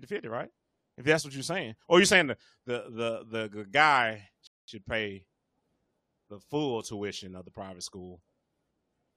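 At 4.47 s the speech hits a rebuffering stall: playback ran dry, goes silent for about 210 ms, then picks up right where it stopped, nothing skipped.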